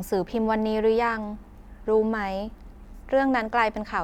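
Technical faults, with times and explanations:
No technical faults are audible.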